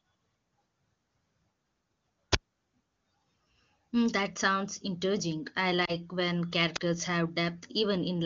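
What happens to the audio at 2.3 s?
At 2.32 to 2.35 s there is an uninitialised buffer: a block was sent to the output before any audio had been written into it, so whatever leftover values sat in that memory were played as samples. The result is a sudden, loud burst of digital noise lasting about 23 ms, which fits a 1024-sample buffer. Unlike a dropout, which leaves a silent gap, this replaces the audio with loud, harsh noise.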